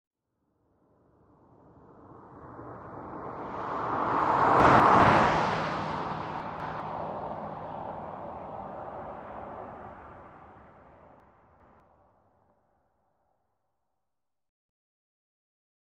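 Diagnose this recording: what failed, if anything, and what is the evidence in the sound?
Chunks out of order at 4.6–5.0 s, 6.4–6.8 s and 11.2–11.8 s, a buffer-stage fault. Each time a 200 ms chunk plays late, one chunk late in the first two and two chunks late at 11.2 s, so the sound jumbles briefly across three hard joins.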